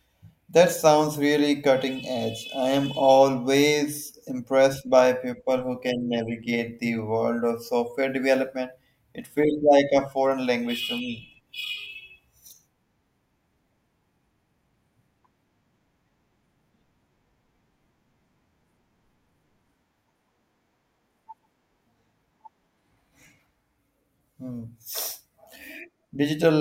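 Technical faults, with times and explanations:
5.8–7.0 s, overlap-add ripple: the speech was split into windowed frames and rejoined with overlaps whose gains don't sum evenly, so the level dips by about 6 dB once per frame, around a hundred times a second, giving a metallic buzz with extra tones around the voice.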